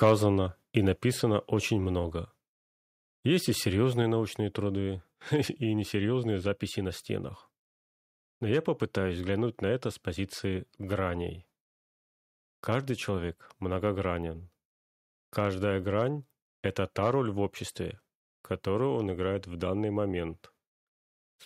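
From 0.02 to 0.08 s, right at the start of the speech, there is microphone overload. The loudest peaks are flattened at the top, giving a brief harsh, crackling edge to the loudest syllables. The cause is likely an input level set too high, driving the signal about 3 dB past the converter's full scale so that a small fraction of the samples are cut off rather than reproduced.

At 1.02 s, just before "очень много", the microphone volume is stepped down. Voice and background both drop abruptly by about 2 dB in a single step, with no gradual fade. The likely cause is the call software reacting to the overloaded peaks at the start by lowering the device's input volume once, which leaves a level step in the speech.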